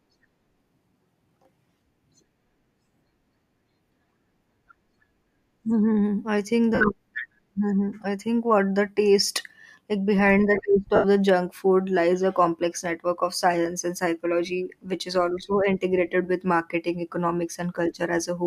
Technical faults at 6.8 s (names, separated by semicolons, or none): lost LE Audio frames